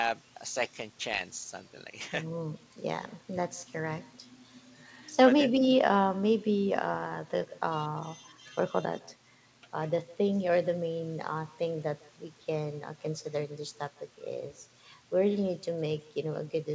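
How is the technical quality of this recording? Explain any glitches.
The recording has one persistent fault, running through all the speech: echo with no canceller. The far end plays the call over a loudspeaker and its microphone sends it back unremoved, so each phrase is followed roughly 150 ms later by a copy about 24 dB quieter and thin. On a waveform, every syllable trails a small delayed replica. A spectrogram shows faint ghost repeats of each burst, all cut off at 8 kHz by the G.722 call codec.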